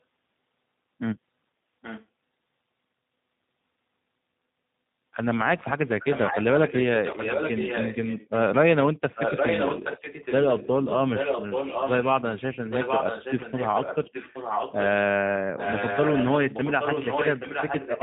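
The whole clip has passed through a G.729 codec at 8 kbit/s, which rebuilds speech from a coarse vocal-tract model and a few pulses per frame and discards everything above 4 kHz. The speech sounds muffled, rough and synthetic, and the codec damage is plainly audible throughout.

An echo leak, likely from a far-end loudspeaker whose echo canceller let part of its microphone pickup back through, returns the speech 825 ms late. At 1.82 to 2.06 s it is faint, at 8.83 to 10.68 s it is as loud as the speech itself, and from 11.14 to 14.84 s and 15.57 s to the end it sits just below it.

Inside that loud stretch, speech suppressed in double talk appears, likely because the canceller could not tell talker from echo and turned both down. Around 8.98 to 9.18 s the speech drops by about 30 dB for roughly a tenth of a second, and at 10.0 s it dips slightly.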